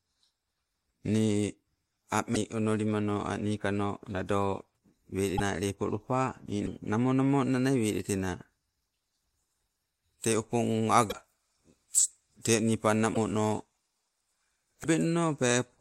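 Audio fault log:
2.34–2.37 s, 5.37–5.40 s, 6.65–6.68 s, 11.09–11.13 s, 13.13–13.17 s, 14.83–14.86 s: broken MP3 bit reservoir. The speech skips ahead, followed by a brief glitch of about 25–45 ms, roughly one to two 26.1 ms MP3 frames. The likely cause is dropped frames: the next frame reads borrowed reservoir bytes from the wrong frame.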